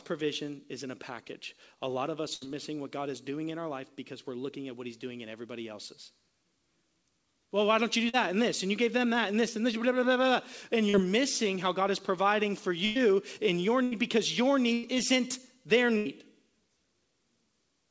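Speech carried over a call link, band-limited to nothing above 8 kHz, which fits a G.722 path at 64 kbps. A burst of packet loss hits at 2.34, 12.85, 13.83, 14.73 and 15.97 s: 80 to 100 ms of audio goes missing each time, and the receiver sustains and fades the last sound before resuming further on. Short concealed packet loss at 8.09 and 10.89 s drops about 40 ms each, which the decoder patches over, leaving a brief smear or wobble.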